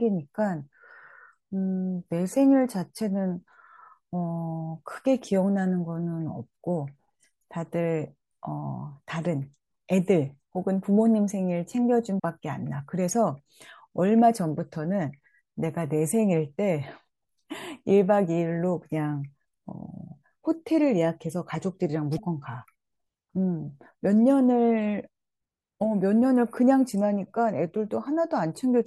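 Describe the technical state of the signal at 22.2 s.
At 22.17 to 22.19 s the speech skips forward abruptly, with a brief garbled disturbance lasting just under 30 ms, roughly one 24 ms frame, before the sound settles again. The likely cause is a broken MP3 bit reservoir. Some frames were dropped, and the frame following the gap reached back into earlier frames for its borrowed data but found bytes from an unrelated frame. It decoded that mismatched data briefly before normal decoding resumed.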